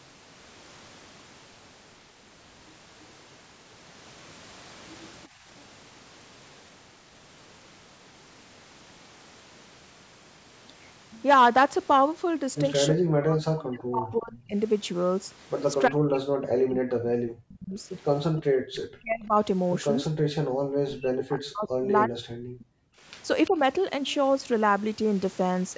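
At 5.28–5.45 s and 22.92–23.06 s, background gated by the echo canceller drops the room sound by about 12 dB and then about 24 dB, showing as brief notches in the noise floor. Speech suppressed in double talk, likely from both sides talking at once, cuts the voice by roughly 40 dB at 12.94–14.57 s, 15.88–19.35 s and 20.08–22.64 s, and by roughly 10 dB at 23.50–23.57 s. These appear as collapsed waveform envelopes and faded or missing spectrogram bands. At 23.46–23.50 s an echo leak, likely from a loudspeaker, adds a faint copy roughly 25 dB down, 343 ms behind the voice, visible as a weak repeated pattern.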